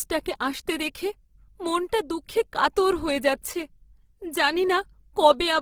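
From start to finish the speech sounds rough and grainy, with a noisy, gritty texture laid over the voice where clean harmonics should be. The top end stays open, reaching up to about 20.3 kHz, so nothing sounds muffled; the damage is in the texture rather than the bandwidth. The likely cause is Opus compression in its music-oriented CELT mode, which keeps each band's energy but fills starved bands with noise or folded copies, consistent with a low bitrate around 16 kbps.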